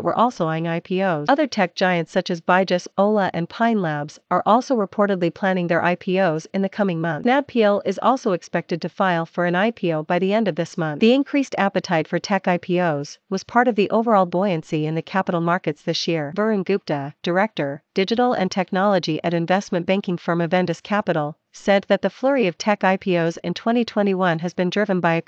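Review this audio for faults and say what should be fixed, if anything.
Nothing in the recording calls for a fix. No audible faults turn up anywhere in it.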